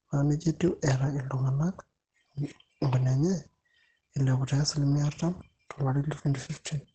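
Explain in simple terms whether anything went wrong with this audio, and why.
Something did go wrong, and it lasts the whole clip. The speech sounds muffled and hoarse, as if heard through a thin wall. Nothing is left above 8.5 kHz, so the crisp, airy top of the sound is gone and everything feels dull. The cause is likely Opus compression pushed very hard. When squeezed this far, the encoder switches to a mode built only for speech. That mode keeps the core of the sound and throws away the rest.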